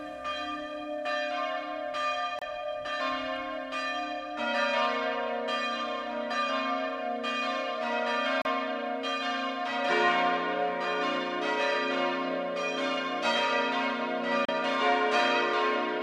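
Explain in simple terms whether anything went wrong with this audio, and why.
Brief silences of about 30 ms break the sound at 2.39, 8.42 and 14.45 s, six seconds apart: a gap at a join of encoded pieces, not a dropout, since nothing is skipped.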